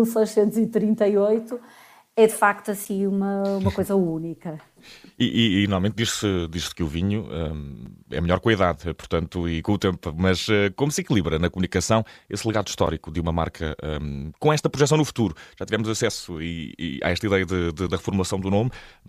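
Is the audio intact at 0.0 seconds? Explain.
Yes, the audio is intact at 0.00 seconds, with no fault present at that moment.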